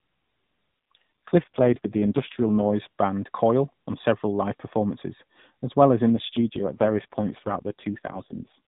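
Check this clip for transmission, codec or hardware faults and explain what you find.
The clip has one kind of fault, occurring twice over narrowband mobile-codec speech.

AMR rate drop, from 0.95 to 2.73 s and again from 6.10 to 8.58 s, just after "as well as in". The link weakens, so the codec spends fewer bits on the voice and more on protection. The speech turns buzzy and synthetic, which fits a fall from 12.2 to 4.75 kbps. Unlike a dropout or a bandwidth switch, there's no gap and the 4 kHz ceiling stays the same.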